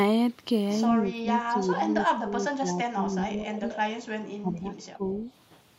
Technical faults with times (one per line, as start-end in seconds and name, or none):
1.00-3.70 speech suppressed in double talk
3.54-3.78 echo leak
4.41-5.30 speech suppressed in double talk
5.09-5.18 echo leak